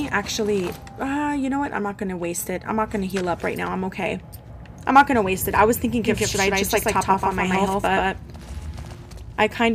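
From 6.05 to 8.95 s a doubled audio track appears: a second, full-band copy trails the original by roughly 150 ms at about equal level, likely from a slower parallel capture path. It has no decay or room colour, and it starts and stops abruptly.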